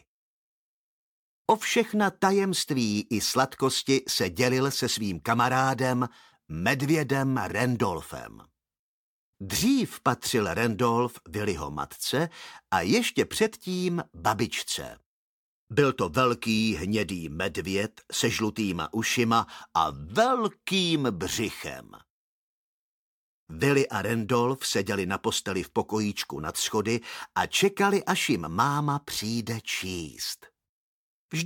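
No technical faults can be heard anywhere in this audio.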